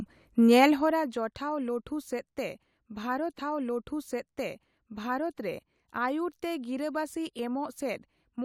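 A speech recording with two problems. From 0.66 to 1.16 s there's zipper noise: the level drops by around 15 dB in coarse, unsmoothed steps, roughly fifty a second, so you hear a fast ticking riding on the speech. Then at 3.38 s a stream segment is repeated: the player queued the same chunk twice, replaying about 2.0 s of audio through 5.38 s, with a small blip where it jumps back.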